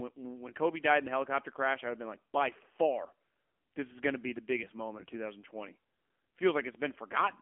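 Speech heard through an AMR narrowband mobile codec for its whole length. The band is confined to roughly 250 Hz to 3.4 kHz, so nothing survives above the codec's 4 kHz ceiling at 8 kHz sampling. Each 20 ms frame rebuilds the voice from a vocal-tract filter fed by a handful of pulses, and the plainly audible buzzy, synthetic edge points to one of AMR-NB's lower modes, around 7.4 kbps.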